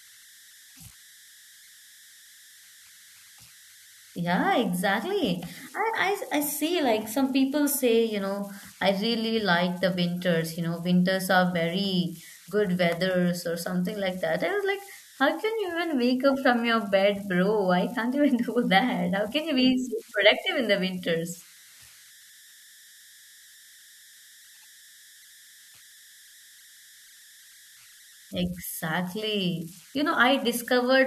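Throughout the speech, converter idle tones sit about 27 dB below the signal: an undithered delta-sigma stage cycles through repeating bit patterns, producing a whistle around 2 kHz in pauses and grain under quiet passages. A spectrogram shows a thin horizontal line near 2 kHz.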